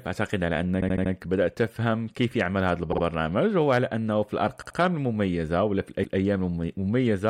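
Repeated frames stutter this speech clip at 0.80–1.11 s, 2.91–3.02 s, 4.61–4.77 s and 6.02–6.18 s. Each time, a short block of compressed audio plays again: 78 ms four extra times, then 52 ms twice, 78 ms twice, and 157 ms once. The block lengths fit runs of two to six codec frames written more than once, and together they add about 0.73 s.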